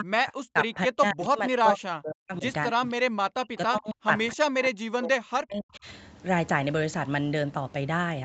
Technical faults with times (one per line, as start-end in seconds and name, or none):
0.00-2.45 speech suppressed in double talk
2.99-5.87 speech suppressed in double talk